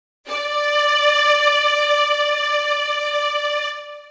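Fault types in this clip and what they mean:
Comfort noise in place of the background: For the first 0.24 s the background is a steady, featureless hiss about 27 dB quieter than the real background that follows, with none of its detail. This is likely discontinuous transmission: the sender stayed silent while its activity detector heard nothing, and the receiver filled the gap with synthetic noise matched only roughly to the background. The call path's band limit, with nothing above 8 kHz, applies throughout.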